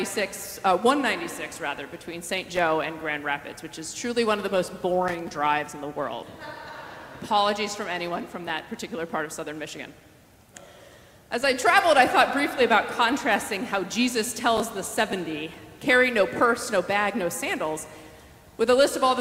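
Loose connector crackle breaks into the audio at 2.54 to 2.59 s and again at 5.08 to 5.36 s as irregular bursts of scratchy crackle. A worn or dirty contact is making and breaking as it shifts, chopping the signal intermittently.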